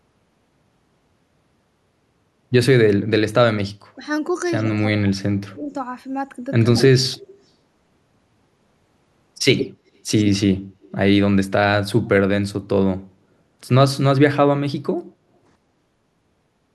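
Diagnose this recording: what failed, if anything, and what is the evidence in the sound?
Speech dips about 5 dB at 3.95–4.02 s and 6.71–6.78 s, and falls about 30 dB from 4.65 to 5.75 s. This is likely speech suppressed in double talk by the call's echo canceller.

A copy delayed 115 ms, about 10 to 15 dB down, trails the speech at 4.66–4.71, 6.64–7.28 and 9.55–10.22 s, with a faint 165 ms copy at 10.82–10.91 s. This is likely echo leak through call processing.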